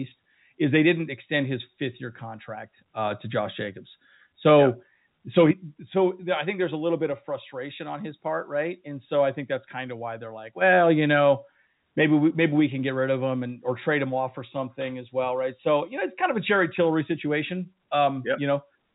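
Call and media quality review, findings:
No faults found in the speech. The G.711 A-law telephone coding path is audible as a band limit with nothing above about 3.8 kHz, consistent with a 64 kbps narrowband call leg, and its quantisation noise is faint or inaudible.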